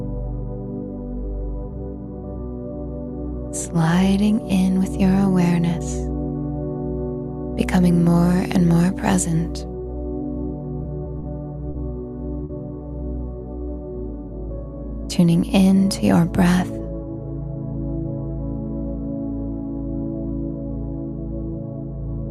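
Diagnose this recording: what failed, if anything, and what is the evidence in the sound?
Network delivery failed at the receiver's jitter buffer, producing three short stalls from late packets at 11.19 to 11.24 s, 11.70 to 11.76 s and 12.44 to 12.51 s. Each time the buffer ran dry, and the last sound was held for 30, 40 and then 50 ms, with a slight buzz or dip, before resuming exactly where it left off. Nothing is skipped, which separates this from lost-packet concealment, where audio is replaced and content is gone. Each stall adds to the overall delay.

The jitter buffer speed-up follows from 15.19 to 15.57 s. Having built up surplus delay, the receiver trimmed pitch-period-length slices repeatedly, shedding around 40 ms in total. The sound runs at 108% speed over that stretch and feels briefly hurried. The pitch stays put, which distinguishes it from a clock or sample-rate mismatch, where speed and pitch rise together. 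Because it is confined to one short window, it is not a steady drift.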